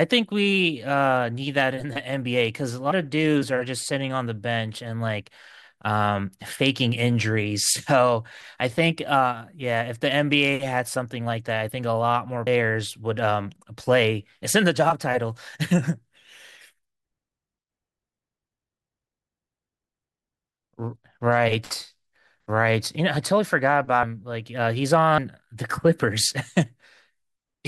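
At 2.9, 12.46, 20.95 and 24.02 s the speech jumps forward as compressed frames are skipped. Whole frames never reach the output, so the audio leaps ahead by roughly 100, 200, 40 and 100 ms respectively. The gaps are steps consistent with a frame of about 21.3 ms. At each join a small chunk of speech is simply gone.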